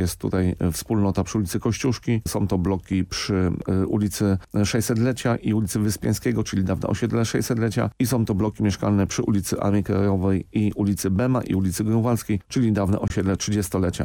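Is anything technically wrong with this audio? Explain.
Yes. From 13.08 to 13.10 s there is a gap at a join of encoded pieces: a 22 ms silence with smeared edges, left by encoder delay and last-frame padding that weren't trimmed. Unlike a dropout, nothing is lost, and the sound resumes exactly where it stopped.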